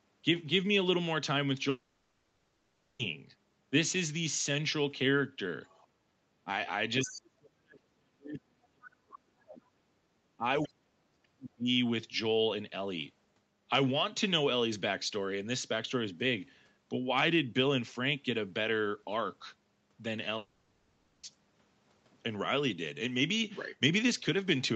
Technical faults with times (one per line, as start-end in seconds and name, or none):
1.69-3.01 long network dropout
5.65-5.87 other side's voice leaking through
6.44-6.49 speech suppressed in double talk
7.03-9.61 speech suppressed in double talk
7.10-7.17 other side's voice leaking through
10.37-11.67 speech suppressed in double talk
10.63-10.68 other side's voice leaking through
20.37-21.25 long network dropout